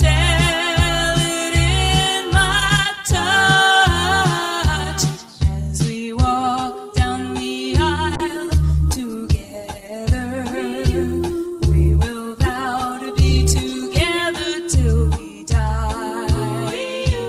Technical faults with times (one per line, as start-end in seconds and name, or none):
8.16-14.10 call bitrate drop